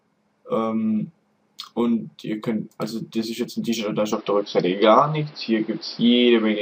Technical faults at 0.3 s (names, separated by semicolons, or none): none